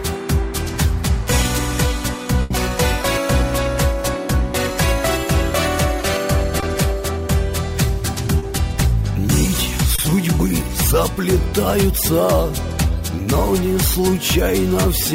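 At 2.42 to 2.51 s there is a burst of packet loss. About 80 ms of audio never arrived. The receiver held the last sound and faded it across the gap. Playback then jumps ahead, and that stretch is simply gone.

Short concealed packet loss follows at 6.60 to 6.63 s, 8.39 to 8.43 s and 9.95 to 9.99 s. Each gap is 20 to 30 ms. The decoder patched it by extending the preceding sound, then blended back. Each one is a brief smear or wobble.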